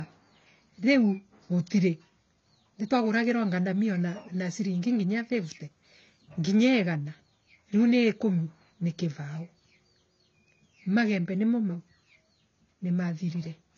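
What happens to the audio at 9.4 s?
At 9.4 s the speech sounds dull and smeared, with a warbling, fizzy edge on sibilants, and this continues through the whole clip. The likely cause is AAC compression: the codec quantises each frame's spectrum coarsely and drops the top end, consistent with a bitrate near 24 kbps. A spectrogram shows a hard ceiling at about 6.9 kHz, nothing above it; the waveform looks ordinary.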